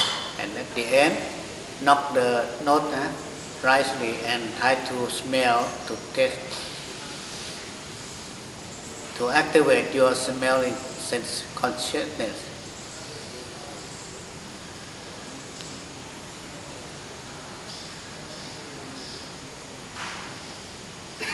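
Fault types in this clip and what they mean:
Resampler restarted on every block: A steady tick at 25 per second runs under the sound throughout, and it is heard only where there is signal. Each 40 ms block was converted to a higher rate on its own, which points to a 24 kHz to 48 kHz step. At every block edge the converter lacked the true neighbouring samples, leaving a small error that repeats at the block rate.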